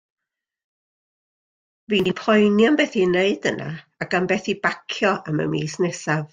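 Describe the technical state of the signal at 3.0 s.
At 3.0 s the audio is intact, with no audible fault at that point.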